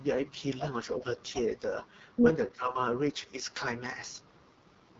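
A short speech clip coded with the AMR wideband (HD Voice) codec, at a rate that sounds like 6.6 kbit/s. Damage is heavy. The voice turns rough and raspy, and nothing sounds above about 7.5 kHz. From 2.54 to 2.77 s the speech dips by roughly 10 dB. This is likely speech suppressed in double talk, where an echo canceller turns the talker down while the other side speaks.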